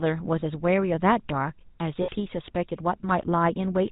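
The speech has been coded with the GSM full-rate codec throughout. It models the vocal tract as a filter and drives it with a sparse pulse train that keeps only every third excitation sample, and it discards everything above 4 kHz. The damage is plainly audible: the voice is dull and band-limited, with the buzzy, gravelly roughness typical of this coder, which fits its 13 kbps rate.

Lost GSM frames then appear twice. From 0.40 to 0.43 s, about 20 ms of the signal went missing, consistent with a single dropped frame. The decoder filled the gap by repeating the last good frame's parameters, so the sound briefly hangs as a short metallic ring. A longer loss runs from 2.02 to 2.09 s, about 60 ms, which fits three consecutive frames. Here the repeated parameters are held for longer, giving a rough, ringing smear before normal decoding resumes.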